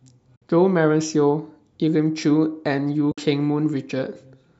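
At 0.36 s and again at 3.12 s the speech drops into a short hole, about 60 ms each time, ending near 0.42 s and 3.18 s. That's AAC frame loss with muting. The decoder zeroed the missing spectrum, and the overlapping windows ease the sound out and back in, so the gaps have soft edges. Sixty milliseconds fits a run of about six short frames, which is what the low-delay AAC the clip was likely carried over would produce.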